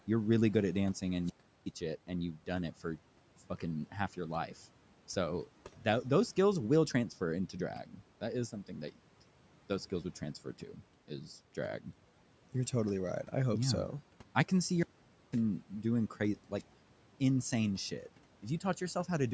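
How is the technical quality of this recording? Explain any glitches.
The recording has two recurring faults, wireless dropouts and speech clipped by noise suppression.

Wireless microphone squelch dropout at 1.20–1.72 s (after "really good at dancing", before "it and"), 14.72–15.44 s and 16.57–16.71 s (after "doing crazy", before "insane shit"). The radio link fades and the receiver's squelch mutes it, so you hear a burst of hiss, then silence of about 0.37 s, 0.50 s and 0.10 s.

Speech cut by the noise suppressor at 7.84–7.99 s (after "skills will transfer into") and 10.44–10.82 s. The suppressor mistakes speech for background and pulls it down by about 9 and 10 dB, so roughly 0.1 s and 0.15 s of speech sound swallowed.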